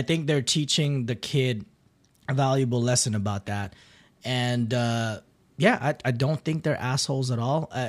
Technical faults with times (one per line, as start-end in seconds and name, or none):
0.84 block of digital silence
3.65 block of digital silence